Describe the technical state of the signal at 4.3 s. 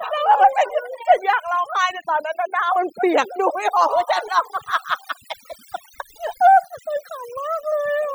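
At 4.3 s the speech carries overdone noise removal, present throughout the clip. Bands near the noise estimate are cut hard, leaving a twinkling near-silent background and taking quiet parts of the voice with them.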